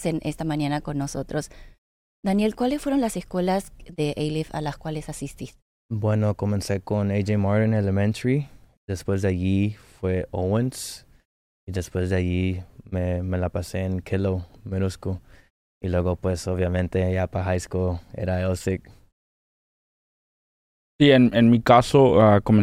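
No technical faults are audible.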